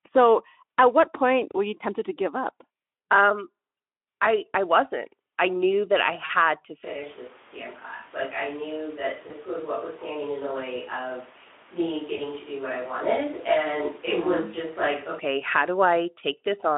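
Just after "I knew that I", from 6.25 to 6.31 s, the speech briefly smears into a buzzy or noise-like, fading stretch. This is VoIP packet loss concealed by the speech codec: the decoder filled a gap of about 40 ms, consistent with two lost frames, by extrapolating the last sound.

From 6.85 to 15.19 s the voice turns roomy and hollow, roughly 5 dB quieter, with background noise about 25 dB below the speech. The likely cause is a switch to a distant microphone.

The same packet-loss concealment recurs at 9.27 to 9.32 s and 12.17 to 12.23 s, each consistent with a single lost 20 ms frame. Both are short buzzy or noise-like smears that fade as the decoder carries the previous frame forward.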